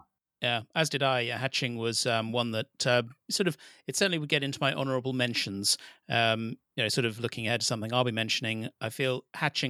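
No audible technical faults.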